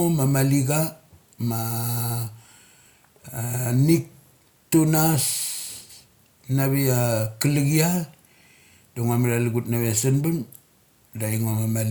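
No technical faults occur at any point in the speech, so there is nothing to place in time order.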